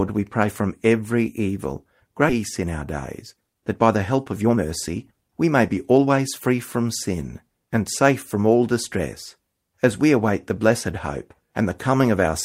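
Just after "pray from every evil", at 2.29 to 2.31 s, the audio skips ahead. About a second of speech is missing, and the two sides are joined directly with no silence and no filler. This happens when held-back audio is discarded because later audio is already waiting. A dropout would leave a hole or a concealment smear. Here the speech simply lurches forward.

Right after the jump, from 2.39 to 2.83 s, a jitter buffer speed-up begins. The receiver trims pitch-period-sized pieces to shed delay, and the speech runs at about 108% while keeping the same pitch. About 50 ms is removed. A longer run follows from 3.22 to 6.48 s, at about 111%, shedding about 400 ms before "from sin and safe". The delivery sounds hurried but not higher in pitch, which separates it from a playback-rate or resampling error.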